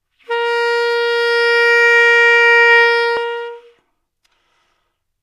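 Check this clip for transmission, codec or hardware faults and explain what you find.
One fault is present. Compressed frames skipped at 3.16 s: about three whole compressed frames of 26.1 ms each are never played, so roughly 70 ms of sound is lost and the audio jumps ahead.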